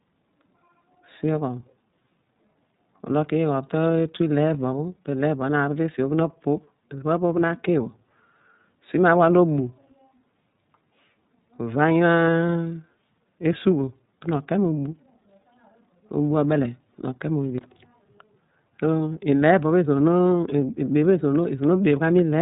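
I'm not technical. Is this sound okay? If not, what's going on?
No, not quite. The whole recording has gone through the iLBC codec, a compression scheme built for internet phone calls. It cuts away everything above 4 kHz, so the speech sounds muffled and phone-like from start to finish. It also rebuilds the sound in separate 30 ms chunks, each handled on its own, and here that leaves the speech clearly rough and a bit synthetic throughout. You can follow it, but it sounds like a cheap call.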